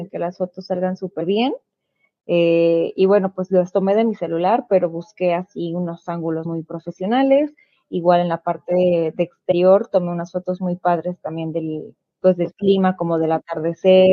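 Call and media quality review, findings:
Compressed frames skipped in the speech at 1.20 s, 6.45 s and 9.51 to 9.53 s. The speech jumps ahead, losing roughly 70 ms, 100 ms and 70 ms. That fits a few whole codec frames dropped each time, either missing from the file or rejected by the decoder as damaged. Suspect the file's integrity or the decoder's error handling.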